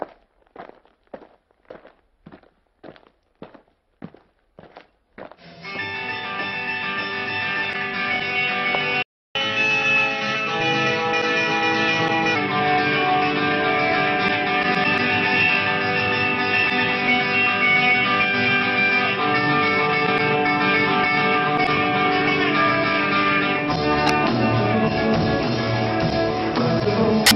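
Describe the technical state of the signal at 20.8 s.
At 20.8 s the signal is intact, with no audible fault at that point.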